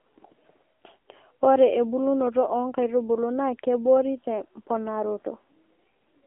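Speech runs throughout through an AMR narrowband mobile codec. The band stops at about 250 Hz and 3.4 kHz, so the sound is thin and muffled. A coarse vocal-tract model makes it buzzy and synthetic. That fits a low bitrate near 7.4 kbps.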